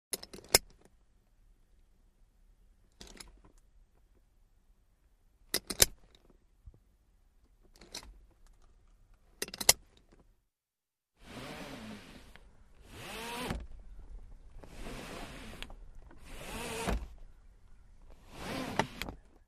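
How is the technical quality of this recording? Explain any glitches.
No glitches can be heard anywhere in the recording. There is nothing in it that calls for explanation.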